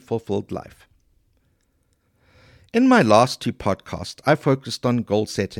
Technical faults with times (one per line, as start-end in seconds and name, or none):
none